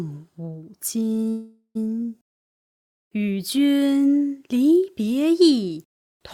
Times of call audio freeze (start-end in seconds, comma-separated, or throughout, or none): 1.29-1.77